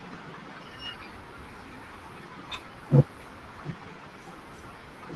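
Overlap-add ripple runs from 2.48 to 3.28 s. The speech was split into windowed frames and rejoined with an overlap whose windows don't add up to a steady gain, so the level swings by about 6 dB once per frame. With frames repeating at roughly 400 Hz, this comes through as a metallic buzz with extra tones around the voice. Throughout, the call codec trims the top end above about 12 kHz.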